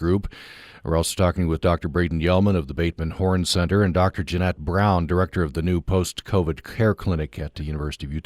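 Nothing goes wrong anywhere in this stretch of speech, so there's no fault to point to at any moment.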